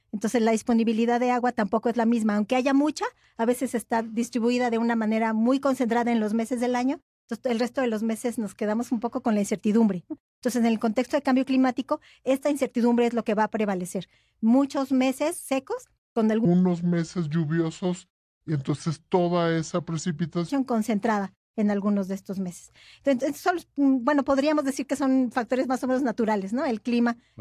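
From 16.45 to 20.50 s, the speech drops to two-thirds speed and about 7 semitones lower. This wrong sample rate fits 48 kHz audio played at 32 kHz.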